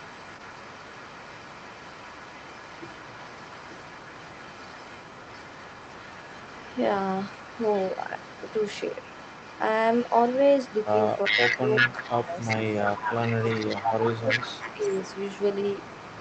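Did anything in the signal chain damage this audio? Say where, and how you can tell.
Yes. The damage comes from the far end's call processing. Its echo canceller likely failed to remove its own loudspeaker output from its microphone, so an echo leak returns a copy of the speech delayed by 388 ms. From 0.0 to 9.64 s that copy sits faintly, about 20 dB under the direct speech. From 9.91 s to the end it rises to about 5 dB below.

The same canceller shows speech suppressed in double talk. When both sides spoke at once it likely could not separate the local talker from the returning echo, and it attenuated everything. The talker's level sags by roughly 10 dB from 11.27 to 12.32 s. It dips by about 15 dB across 13.2 to 14.51 s and drops by around 10 dB in a brief bite at 14.75 to 14.82 s.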